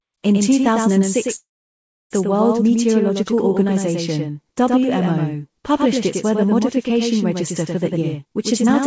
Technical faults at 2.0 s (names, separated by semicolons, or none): doubled audio track; call audio freeze